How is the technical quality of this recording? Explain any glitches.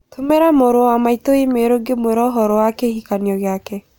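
Listening closely, nothing in the recording stood out as a technical problem, so there are no glitches to explain.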